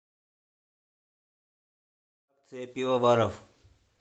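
No technical faults are present in this speech signal; the gentle rise in level that settles by about 3.5 s is a deliberate edit rather than a defect.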